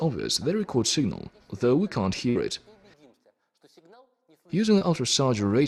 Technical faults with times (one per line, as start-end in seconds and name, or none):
2.29-2.37 burst of packet loss
4.79-4.83 short concealed packet loss